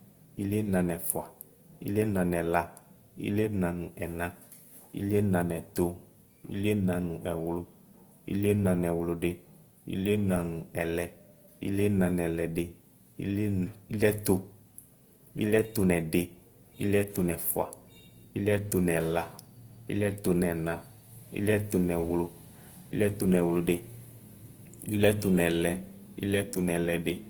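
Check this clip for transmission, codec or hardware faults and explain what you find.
There's one fault, and it runs through the whole speech clip: Opus compression, likely. The damage is plainly audible from start to end. Bandwidth stays full, but the detail is rough and grainy, and tonal parts come out noisy rather than clean. That fits Opus in its music (CELT) mode at something like 24 kbps. It keeps each band's energy, but without enough bits it fills bands with folded lower content or noise, so you get grit instead of swirl.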